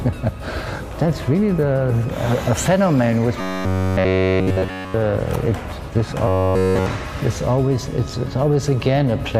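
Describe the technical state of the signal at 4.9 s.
At 4.9 s you're right at the tail of a stretch of robotic sound from repeated short buffers, running from about 3.41 to 4.94 s. The whole span sits on a fixed, metallic buzz near 93.8 Hz, with the underlying sound only loosely tracked underneath. The likely cause is audio arriving too slowly, so the playback keeps looping the last roughly 10.7 ms chunk instead of real audio, and that loop period sets the buzz pitch.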